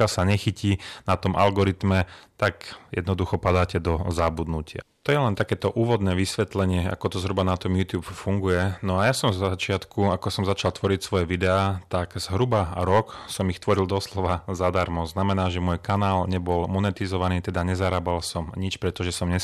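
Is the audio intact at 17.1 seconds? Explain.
No. Hard clipping runs through the whole clip, including 17.1 s: the speech is driven about 9 dB past what a stage can pass, so a small fraction of samples are cut flat at their peaks. Those flattened tops add high harmonics, heard as crackle and harshness on louder syllables.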